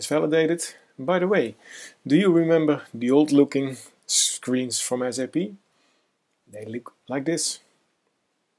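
Nothing in the audio calls for comment, as no technical fault turns up anywhere along it.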